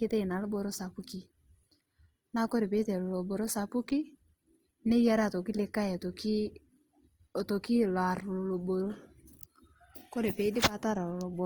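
Speech runs through the whole clip with plainly audible Opus compression damage, likely from Opus in its CELT music mode at a low rate, around 24 kbps. The spectrum still reaches about 20.2 kHz, but the upper bands have been filled with folded or noise-like content, so the voice sounds grainy and rough. That texture separates it from MP3 artefacts, which would swirl and leave holes, and from muffled narrowband speech coding.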